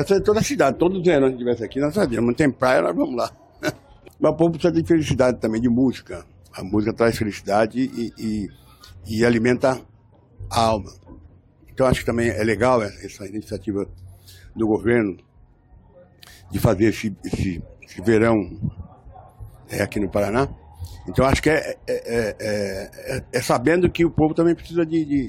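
Nothing in the audio trips the ear here: there's no technical fault to point to anywhere along the way.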